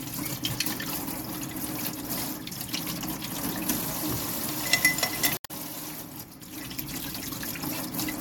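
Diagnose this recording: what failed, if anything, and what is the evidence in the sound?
At 5.34 s the sound breaks up until about 5.51 s, roughly 0.17 s of disrupted audio. This is damaged data in a compressed stream, a fault at the codec and storage stage. Some of the encoded bytes were corrupted, so the decoder misread or refused those frames, lost its place in the bitstream, and searched for the next valid frame header to resynchronise.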